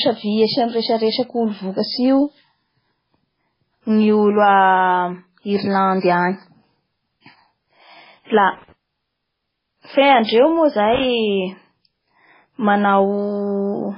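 Throughout the speech the sound is watery and swirly, with heavy codec damage, metallic chirping around s sounds, smeared attacks and nothing above 5.3 kHz. That is likely MP3 compression at a very low bitrate, which fits something around 16 kbps. With too few bits, the encoder discards weaker frequency lines that then flicker in and out from frame to frame. It also cuts the treble at a fixed frequency, which removes everything above 5.3 kHz.

At 8.27 s a brief hiss, lasting about 27 ms until 8.30 s, runs ahead of a sharp attack, and the attack itself sounds soft or smeared. This is pre-echo. The codec spreads its quantisation noise across a whole transform block, so when a sudden onset falls late in that block, noise sized for the loud part also fills the quiet stretch just before it.

From 8.52 to 8.72 s, and again from 10.94 to 11.05 s, an irregular burst of crackling and scratching cuts across the audio. 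This is loose connector crackle. A worn or dirty contact is making and breaking rapidly as it shifts, chopping the signal on and off many times within each burst, which produces that rough, broken texture.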